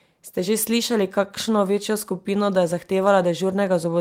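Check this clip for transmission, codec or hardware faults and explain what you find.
Nothing stood out on listening to the speech in this recording.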